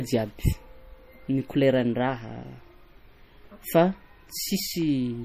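MP3 compression damage runs throughout this speech clip, from start to finish. The audio has nothing above 15.2 kHz, a hard ceiling where the encoder discarded the treble, and the damage is plainly audible. The likely cause is MP3 encoding at a low bitrate, pointing to something around 40 kbps. With so few bits, the encoder zeroes weaker frequency lines that drop in and out between frames, giving the sound a watery, swirling texture.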